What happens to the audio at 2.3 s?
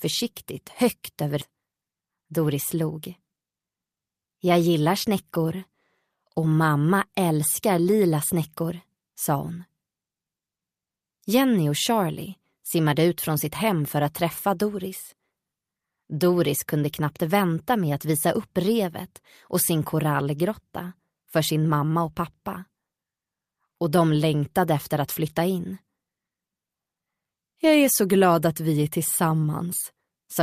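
Right around 2.3 s you're inside a jitter buffer speed-up that runs from about 1.51 to 3.53 s. The receiver had built up more buffered audio than it wanted, so it trimmed out lots of tiny pitch-period-sized slices back to back to catch up. Playback runs at roughly 117% speed for those two seconds with the pitch unchanged, and something like 0.4 s of material disappears, so the passage comes across noticeably rushed.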